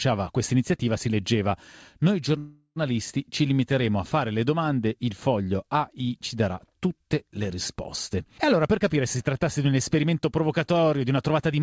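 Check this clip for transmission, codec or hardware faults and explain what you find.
Two jitter-buffer faults are present, and the G.722-style band edge at 8 kHz fits a 64 kbps wideband call link.

A call audio freeze runs from 2.38 to 2.79 s. Delayed packets likely drained the jitter buffer, so about 0.38 s of fading, smeared continuation and then a brief 40 ms silence is inserted. On the spectrogram it appears as blurred horizontal streaks.

A jitter buffer speed-up runs from 8.14 to 11.61 s. The receiver trims repeated pitch-period slices, roughly 0.3 s in total, to cut delay. Playback runs at about 107% with the pitch unchanged, so it sounds hurried.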